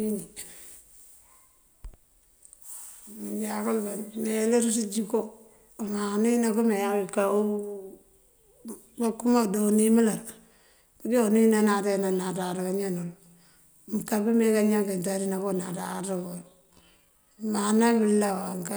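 At 15.77 s the processing likely stretched the final stretch of speech to fill a longer slot, running it at about 0.68 times its normal pace through to the end while holding the pitch steady by repeating short fragments. This time-stretched section makes the pace drop suddenly without any fall in pitch, and the slowed speech drags.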